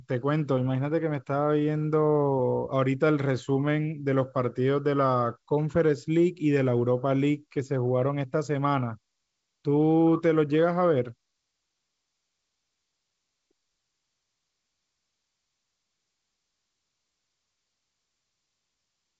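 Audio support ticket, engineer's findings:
No faults found: wideband telephone audio consistent with G.722 coding in its 64 kbit/s mode, bandwidth extending to 7.7 kHz with nothing above, coding damage faint at most.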